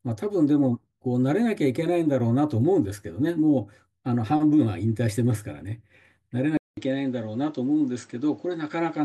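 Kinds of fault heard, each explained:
Input switched to a poorer device: after a 200 ms gap at 6.57 s, the sound turns dull, with nothing above 8.1 kHz and a faint new noise floor, at the same overall level, likely from a mic change.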